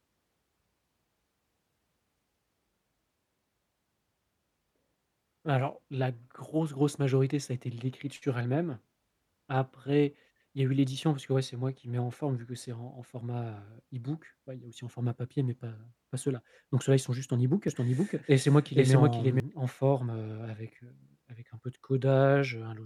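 From 17.68 to 19.4 s, after "sont juste en ebook", the speech sounds twice: a dry copy trails about half a second behind at roughly equal loudness, cutting in and out abruptly before "en forme heu avec". This doubled audio track likely comes from a slower second capture path.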